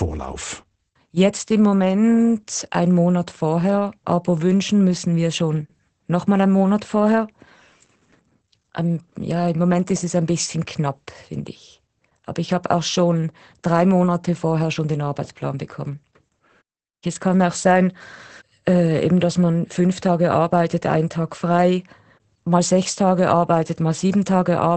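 A speech clip carrying Opus voice compression from start to finish. Nothing survives above about 8.6 kHz, and the voice sounds muffled, hoarse and a bit robotic. That points to SILK's wideband mode starved of bits, which fits a rate of around 12 kbps.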